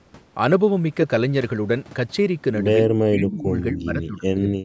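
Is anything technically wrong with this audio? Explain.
Yes. From 3.1 s to the end, the speech is suppressed in double talk. Both sides were likely talking at once, and the echo canceller, unable to tell this talker from loudspeaker echo, clamped down on both. The voice drops by as much as about 40 dB for roughly a second and a half.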